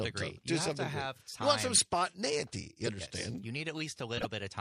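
From start to end the sound has a watery, swirling quality. The treble is dull and cut off, and fine detail flickers in and out. Sharp attacks blur. This damage is plainly audible. It is likely MP3 compression at a low bitrate, which fits about 64 kbps. With so few bits, the encoder drops the top of the spectrum and zeroes weak frequency lines, so they switch on and off from frame to frame.

At 1.75 to 1.85 s there is a short burst. It peaks at about -15 dBFS. Another burst follows at 4.16 to 4.25 s, quieter, at about -20 dBFS. Each is a corrupt frame decoded, spread over a few frames. Damaged bits gave the decoder wrong gains or misread codes. It still played those frames, so energy landed at the wrong frequencies for about 0.1 s each time.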